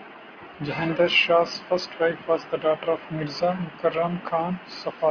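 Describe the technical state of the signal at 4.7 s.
At 4.7 s the speech signal is intact, with no technical fault present at that moment.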